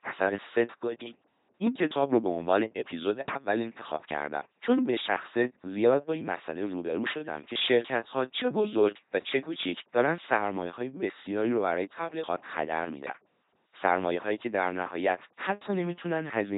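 From start to finish the speech passes through an LPC-10 vocoder at 2.4 kbit/s. Each moment is rebuilt as purely voiced buzz or purely unvoiced noise through a small resonant filter. The voice sounds mechanical and robotic. Nothing remains above 3.9 kHz.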